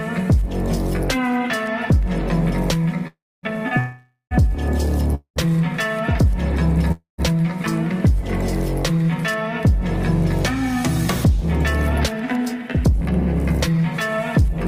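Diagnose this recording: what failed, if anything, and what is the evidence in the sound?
Network stage: a call audio freeze, likely packets held up until the jitter buffer emptied. Gaps at 3.07–3.46, 3.79–4.34, 5.15–5.39 and 6.92–7.21 s fade toward silence, then resume intact.

Jitter buffer speed-up, 13.68–14.47 s: the receiver trimmed about 50 ms of pitch periods to shed delay, so sound runs 7% faster, pitch unchanged.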